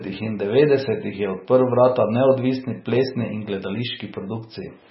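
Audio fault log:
Throughout: MP3 compression, likely the cause of the dull, smeared sound of this speech. Nothing is present above 5.6 kHz because the encoder, short of bits, cuts the treble at a fixed point, so s sounds lose their hiss. The damage is heavy: weak frequency lines are zeroed and flicker on and off between frames, giving a watery, swirling texture, and consonant attacks blur. This degree of loss fits a very low bitrate of around 17 kbps.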